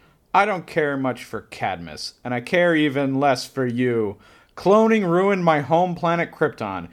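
A speech recording with nothing technically wrong to point to: the signal holds steady throughout, with no breaks, level jumps or other disturbances anywhere in it.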